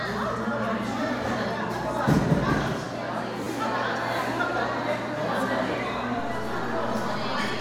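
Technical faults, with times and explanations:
3.44–3.46 s and 5.72 s: repeated buffer. Each is a tiny stutter, a brief click-like buzz where one slice of sound plays again with hard joins: three times in a row at 3.44 s, twice at 5.72 s. New audio arrived late, so the last block was replayed, which fits a 10 ms buffer.
6.19 s to the end: DC step. A low thump at 6.19 s while the sound carries on unchanged. The waveform's zero line jumps to a new offset, as when a converter recalibrates or an input with an offset is switched in.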